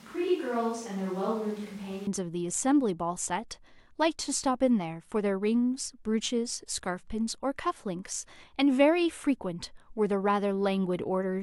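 A speech recording that opens roomy and hollow, with thin bass, a level about 5 dB lower and more background noise, until an abrupt return to close sound at 2.07 s. This is likely a switch to a distant microphone: added reverberation alone wouldn't also raise the noise or cut the level.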